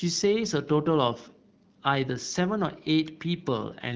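No technical faults are audible.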